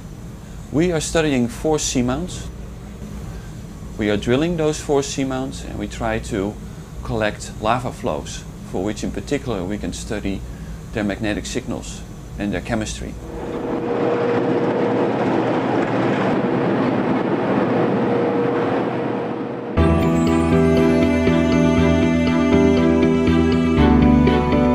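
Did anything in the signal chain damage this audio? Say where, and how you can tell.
No, nothing stood out on listening that would point to damage at any stage of the signal chain.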